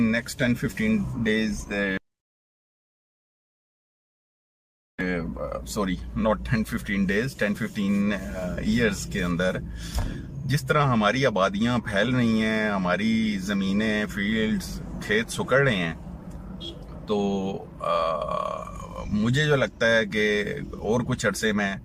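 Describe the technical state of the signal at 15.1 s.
At 15.1 s the signal is intact, with no dropout, clipping, glitch or other technical fault present.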